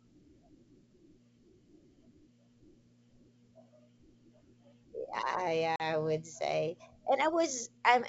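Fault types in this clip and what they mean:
Packet loss on an ADPCM call: at about 5.76 s the speech drops into a hard-edged hole of silence lasting about 40 ms, the length of a couple of lost packets. When it resumes, the sound is briefly off in level or slightly rough before settling within some tens of milliseconds. The gap was filled with silence, so the decoder's adaptive predictor and step size no longer matched the sender's until they re-converged on the wideband G.722 stream.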